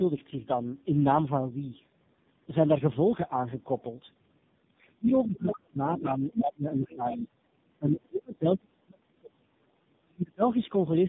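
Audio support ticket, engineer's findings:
Tandem speech coding, whole clip: call passed through GSM full rate 13 kbit/s, G.711 A-law, G.723.1 6.3 kbit/s, G.711 A-law, then AMR-NB 7.95 kbit/s, so speech was re-encoded by three speech codecs in a row. Result: rough, noisy, muffled speech with nothing above 3.7 kHz.

Other side's voice leaking through, 5.45–5.56 s, 6.85–6.95 s, 7.12–7.17 s: likely residual echo the canceller failed to remove from the mic. Far-side voice audible in short scraps, around 5 dB, 20 dB and 15 dB below the speech respectively.

Speech suppressed in double talk, 7.79–9.75 s and 10.04–10.42 s: likely echo canceller misreading near-end talk as loudspeaker echo and attenuating both. Near speech pulled down by roughly 35 dB and 40 dB at deepest, about 2 s and 0.4 s affected. The lost lowest bass is the call mic high-pass, which is normal and not a fault.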